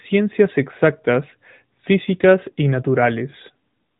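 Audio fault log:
Throughout: AMR narrowband mobile codec, nothing above 3.8 kHz, and the speech turns plainly buzzy and synthetic, since a 10.2 kbps pulse-driven vocal-tract model rebuilds it.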